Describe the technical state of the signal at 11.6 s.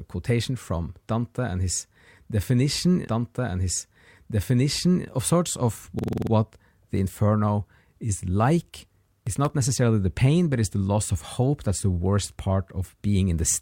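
At 11.6 s the speech signal is intact, with no audible technical fault at that point.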